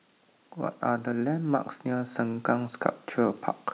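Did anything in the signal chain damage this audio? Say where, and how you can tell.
Yes. Automatic gain rising, from 0.84 s to 3.46 s, in the call-processing stage. The speech and the background noise floor swell together by about 4 dB over those two and a half seconds, rather than jumping. That shared, gradual lift is the sign of an automatic gain control that judged the input too quiet and ramped its gain up. The narrow band with nothing above 4 kHz fits the G.711 mu-law call path, which is not a fault.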